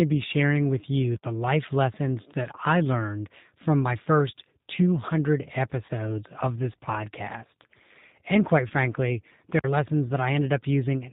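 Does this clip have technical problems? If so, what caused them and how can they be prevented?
Yes. The whole recording carries the sound of the G.729 codec. Nothing above 4 kHz survives, and the speech has a rough, slightly synthetic grain, which fits an 8 kbit/s stream. The codec rebuilds each 10 ms frame from a vocal tract filter, a pitch predictor and a handful of pulses rather than the actual waveform. That rebuilt texture sets it apart from a plain telephone-band filter, which would only dull the sound without roughening it. Using a wideband codec such as G.722 or Opus at a higher bitrate would prevent this.

VoIP packet loss concealed by the speech codec occurs twice. The first is at 5.86 to 5.91 s, just before "of this podcast", and covers about 30 ms of missing audio. The second is at 8.68 to 8.72 s, covering about 20 ms. These spans fit three and two lost 10 ms frames. Instead of a silent gap, the decoder stretches the last pitch and filter into a brief buzzy or noisy sound that fades, and the speech stays weak for a moment after it resumes. 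The stretched sound and the weak recovery distinguish this from a hard dropout. A more stable network path, a larger jitter buffer or forward error correction would prevent it.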